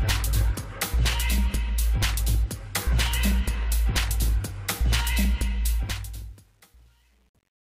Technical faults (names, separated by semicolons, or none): truncation distortion on a fade